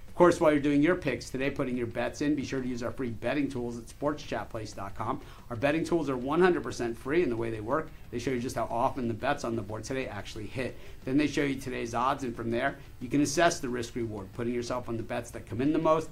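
Nothing technically wrong turns up anywhere in this audio, so there's no fault here to point to or explain.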